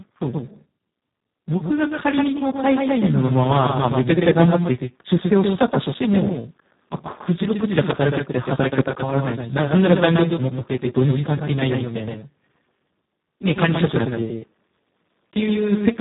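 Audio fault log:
throughout, doubled audio track: a hard-edged second copy trails about 150 ms behind, a few dB quieter, likely the same audio captured twice along a slower path.
throughout, Speex codec: speech is hoarse and noisy, with nothing above 3.8 kHz; the heavy damage points to Speex at a very low bitrate, around 4 kbps.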